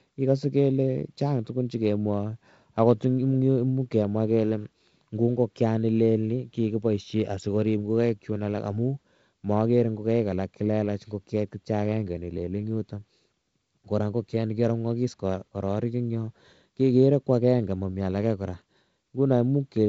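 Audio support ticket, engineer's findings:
No faults found; G.722 wideband path working as expected.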